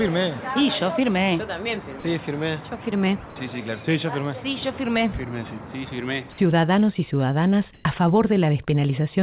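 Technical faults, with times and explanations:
2.00 to 2.04 s, sound dropped by the voice detector: for about 40 ms the sound gives way to flat, steady noise before it picks up again. The likely cause is the sender's detector mistaking a quiet stretch for background and pausing transmission while the receiver filled the gap with comfort noise.
7.74 to 7.84 s, comfort noise in place of the background: roughly 100 ms of the real background, sitting about 31 dB below the loud parts, turns into smooth, featureless hiss about 2 dB quieter. That's likely discontinuous transmission swapping the true background for synthetic noise, band-limited to 4 kHz like the G.711 call path carrying it.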